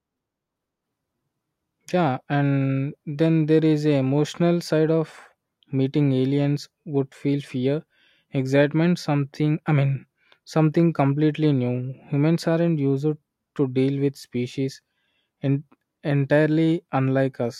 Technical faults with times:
none

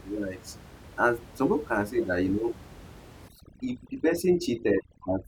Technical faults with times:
3.28-5.28 overdone noise removal

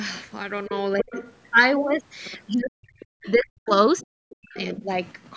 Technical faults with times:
1.02-1.35 other side's voice leaking through
1.03-1.08 speech suppressed in double talk
2.59-2.76 speech suppressed in double talk
2.99-3.31 other side's voice leaking through
3.35-3.71 speech suppressed in double talk
3.97-4.06 other side's voice leaking through
4.02-4.56 speech suppressed in double talk
4.56-4.83 other side's voice leaking through

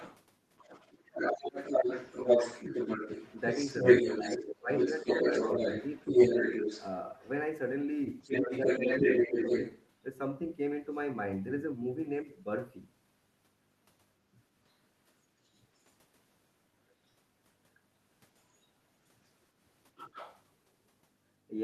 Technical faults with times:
0.00-9.90 other side's voice leaking through
4.26-5.08 speech suppressed in double talk
8.41-9.61 speech suppressed in double talk
14.33-15.83 other side's voice leaking through
17.07-17.14 other side's voice leaking through
18.38-20.43 other side's voice leaking through

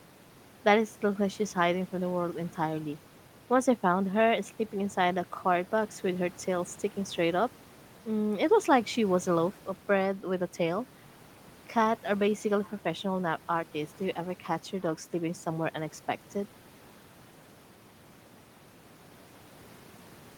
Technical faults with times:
none

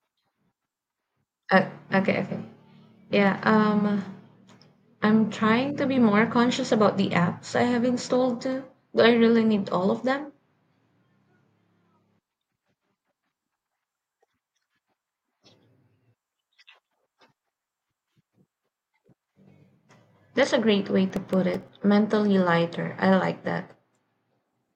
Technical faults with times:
21.10-21.68 processor overload crackle

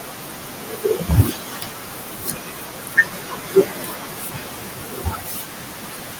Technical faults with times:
0.00-6.20 noise suppressor artifacts
0.00-6.20 speech cut by the noise suppressor

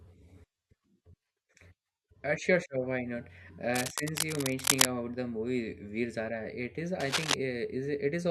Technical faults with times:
3.74-4.88 cable scratch noise
7.00-7.34 cable scratch noise

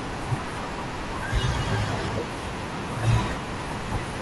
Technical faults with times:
0.00-4.22 low-delay AAC compression

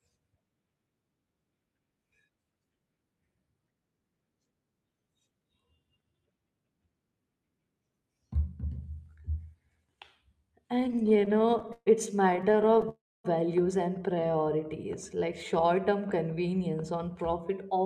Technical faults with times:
10.75-11.88 repeated stalls (stutter)
12.30-12.89 repeated stalls (stutter)
12.89-13.26 call audio freeze
14.15-14.67 jitter buffer slow-down
16.52-17.82 jitter buffer speed-up

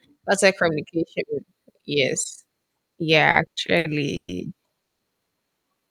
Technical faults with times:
3.31-4.30 repeated stalls (stutter)
4.82-5.01 call audio freeze

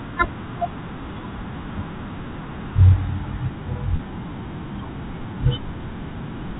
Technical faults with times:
3.96-3.99 packet loss with pitch repetition

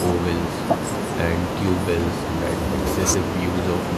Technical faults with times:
none

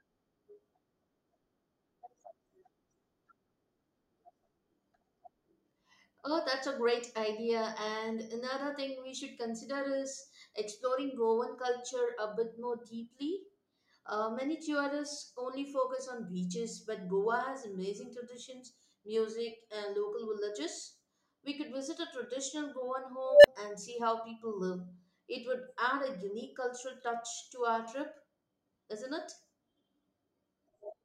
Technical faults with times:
23.25-23.47 unstable filter

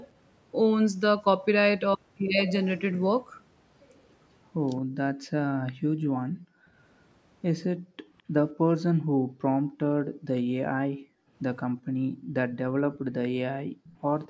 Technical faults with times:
4.82-6.67 background gated by the echo canceller
7.77-13.84 background gated by the echo canceller
8.60-8.65 speech suppressed in double talk
11.71-11.77 speech suppressed in double talk
13.84-14.28 echo leak

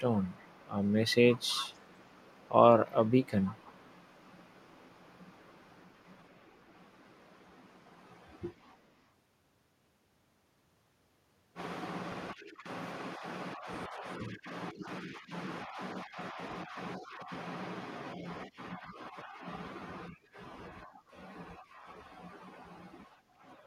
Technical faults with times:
0.23-2.50 echo leak
2.85-7.21 echo leak
8.52-9.03 echo leak

